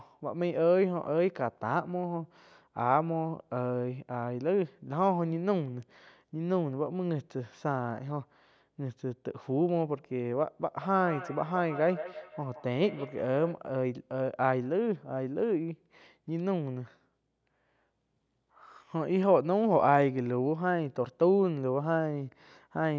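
From 10.82 to 13.62 s there's a feedback echo between two devices: the speech comes back at a steady interval of roughly 150 ms, peaking at about 13 dB below the direct voice. Two devices on the same call are sharing a room, so one's loudspeaker feeds the other's microphone, and neither echo canceller catches sound it didn't play itself. The result is a quick, metallic slapback trailing the speech.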